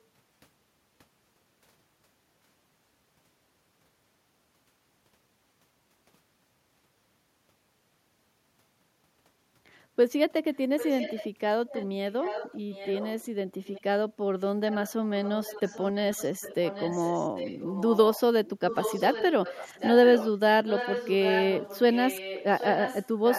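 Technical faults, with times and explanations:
10.54–11.29 s, 11.69–13.26 s, 13.65–13.82 s, 14.67–14.92 s, 15.23–20.28 s and 20.65 s to the end: echo leak. A delayed copy of the speech returns about 0.79 s behind the original. It is mostly about 10 dB below the direct sound, falling to about 15 dB down at 14.67 s and about 20 dB down at 13.65 s. The likely cause is a loudspeaker on the far side whose echo canceller did not fully remove what its microphone picked up, so that residue was sent back into the call.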